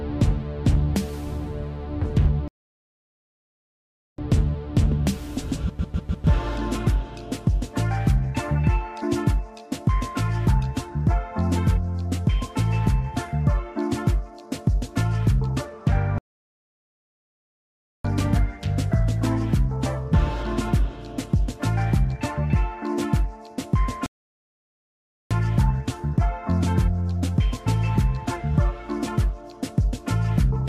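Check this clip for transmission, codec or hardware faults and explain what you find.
Three rebuffering stalls interrupt the clip, at 2.48 to 4.18 s, 16.18 to 18.05 s and 24.06 to 25.31 s. Each time, the player ran out of downloaded audio and waited. The sound drops to silence for 1.7, 1.86 and 1.25 s, then resumes exactly where it stopped, adding time without losing any audio.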